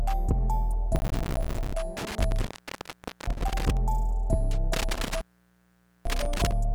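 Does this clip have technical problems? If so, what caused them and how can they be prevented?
Yes. From 0.96 to 1.74 s there is processor overload crackle. The processor missed its deadlines over and over, and each missed buffer dropped to silence, producing dense gritty tearing. The tiny gap spacing fits buffers of roughly 5 ms. Unlike a contact fault, the sound never fully cuts out. Prevent it with a larger buffer or less processing load.

Intermittent contact occurs from 1.97 to 3.77 s and again from 4.73 to 6.52 s. A loose connection opens for about 0.81 s and then about 0.84 s, with crackle at each break. These are sustained dropouts rather than rapid micro-gaps. Prevent it by reseating or replacing the cable and connector.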